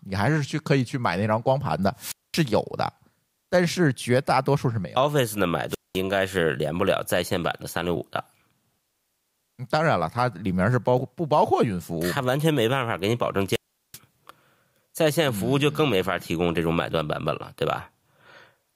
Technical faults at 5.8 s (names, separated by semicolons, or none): wireless microphone squelch dropout